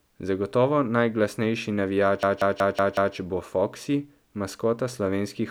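At 2.23 s the speech locks into a system hang loop until 3.16 s: the machine froze while the audio hardware kept replaying one 186 ms chunk, which fits an 8192-sample buffer. It repeats five times at about 5.4 Hz, a machine-gun stutter.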